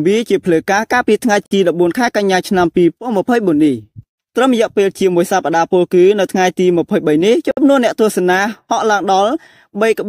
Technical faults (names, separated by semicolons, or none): gap at a join of encoded pieces